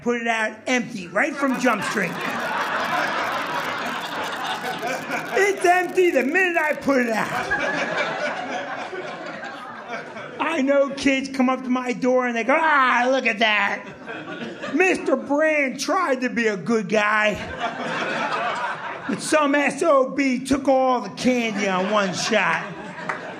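From 1.47 s to 7.47 s there is a steady crackle, a dry fizz that persists through any pauses. This is an unreliable data bit. One bit is flipping at random. Each flip adds an identical spike, about -18 dBFS in size.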